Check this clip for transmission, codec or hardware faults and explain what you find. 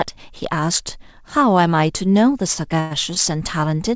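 Two timing faults appear close together in the second half of the speech, both where the receiver had to fill time while waiting for audio.

Short stall from a late packet, 2.54 to 2.58 s: a packet arrived late, the jitter buffer emptied, and the last sound was stretched by about 20 ms. It is heard as a brief held sound, with nothing lost.

Call audio freeze, 2.80 to 2.93 s: the sound holds as a buzzy continuation for about 107 ms, never dropping to silence, then resumes without skipping ahead. The likely cause is packets held up in transit draining the jitter buffer.

The call path is G.722 at 64 kbps, with no content above 8 kHz.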